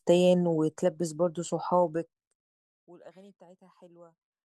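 From 1.79 s to 2.73 s the speech is pulled down by roughly 25 dB with zipper noise: the gain drops in 1 dB jumps, about fifty per second, with no smoothing between them, so each jump leaves a tiny click and the fade sounds like a fast ticking buzz. On a waveform the envelope descends as a fine staircase. A spectrogram shows a comb of faint vertical broadband lines spaced about 20 ms apart across that stretch.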